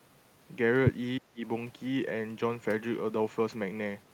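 From 1.19 to 1.42 s the speech level falls sharply, by about 25 dB at its deepest, with roughly a fifth of a second of that stretch affected before the level recovers. This is speech suppressed in double talk, likely caused by an echo canceller meeting simultaneous talk from both ends, failing to tell the near talker from loudspeaker echo, and attenuating everything it picked up. The result is a sudden hole in the speech.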